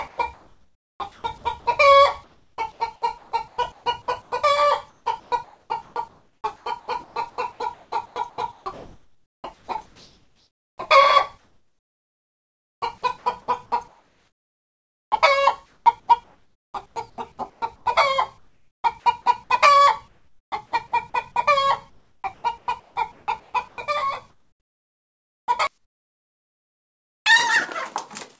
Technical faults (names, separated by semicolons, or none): comfort noise in place of the background; onset clipped by the voice detector